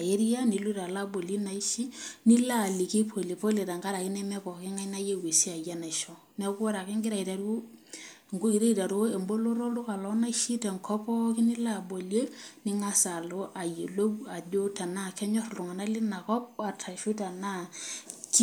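No technical faults can be heard anywhere in the recording.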